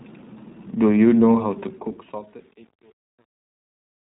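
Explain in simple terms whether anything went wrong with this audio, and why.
The whole recording sounds muffled and slightly rough and robotic, with nothing above 3.8 kHz. That is the iLBC codec, a phone-call coder that squeezes the sound in 20 ms chunks.

From 1.61 s, as the sound fades out, it turns gritty, worst from 1.99 s to the end. This is truncation distortion on a fade: the fade kept too little detail, so the quiet tail breaks into coarse steps.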